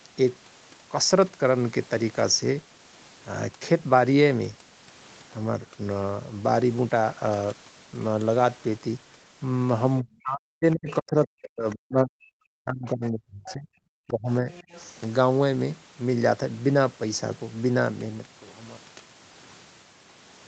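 From 10.0 to 12.35 s the speech dips hard, at its deepest about 40 dB down, for about two seconds in total. This is speech suppressed in double talk, likely because both sides spoke at once and the echo canceller, unable to separate the local talker from the loudspeaker echo, turned everything down. It returns from 12.62 to 13.69 s, again about 40 dB deep, and more lightly from 14.07 to 14.48 s, about 25 dB down. What marks it is that the talker's own voice vanishes or thins, with nothing foreign added.

The other side's voice leaking through is the opposite case: a second voice appears underneath at 10.89–10.93, 11.70–11.75, 13.47–13.53 and 14.51–14.92 s. It sits about 20 to 25 dB below the speech and is likely loudspeaker echo the canceller failed to remove. These are brief scraps of an added voice, not losses. The last one follows directly after the 14.07 s dip. All of this sits within the call band, with nothing above 8 kHz.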